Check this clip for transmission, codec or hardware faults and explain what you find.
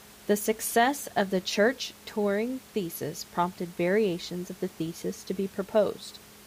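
Nothing in the transmission, codec or hardware chain stands out here, just the speech with a bit of ordinary room noise sitting about 23 dB beneath it, which belongs to the recording space rather than to the system.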